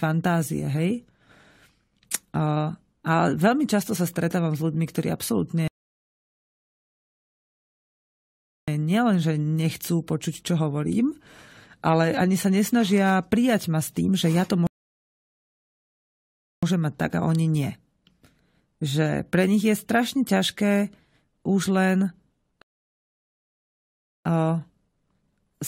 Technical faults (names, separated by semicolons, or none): rebuffering stall